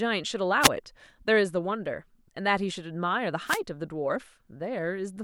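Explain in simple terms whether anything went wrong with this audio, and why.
Two wireless microphone noise hits, from 0.61 to 0.69 s and again from 3.46 to 3.6 s. The radio link briefly fades as signal reflections cancel each other out, so receiver hiss swells up for a moment as a quick burst of static.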